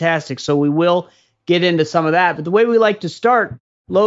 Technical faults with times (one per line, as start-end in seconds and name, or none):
none